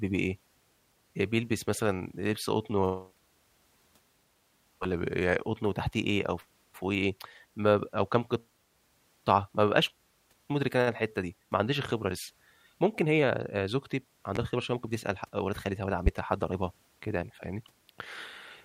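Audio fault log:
4.93–5.45 s, drift correction step: the speech abruptly drops about a semitone in pitch (close to 99 cents) and slows by 5.55%, then snaps back to normal. This is likely clock-matching software briefly lowering the playback rate in one jump to rebalance its buffer.
14.36–14.39 s and 16.06–16.10 s, loud pop: two separate sharp pops cut through the speech, the first about 10 dB above the signal and the second stronger at about 15 dB, while the speech continues underneath. Each is likely a sudden voltage spike from a switch, static or driver glitch entering the signal path.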